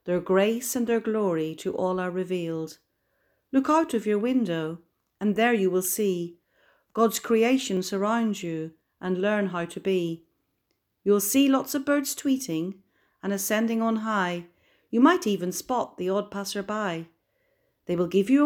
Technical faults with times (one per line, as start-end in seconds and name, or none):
7.77 dropped buffer (overrun)